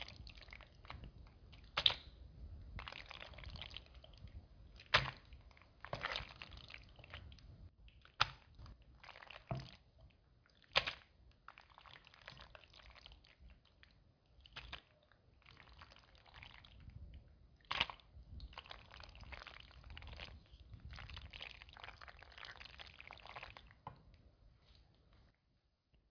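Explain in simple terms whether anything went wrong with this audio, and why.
Nothing went wrong; these sounds have no faults.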